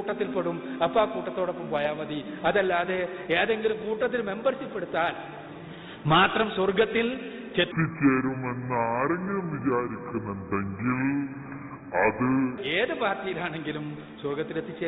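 From 7.72 to 12.58 s there's a section at the wrong speed, playing at 0.662 times normal, about seven semitones down, so the audio drags deep and slow, likely from a wrong playback clock.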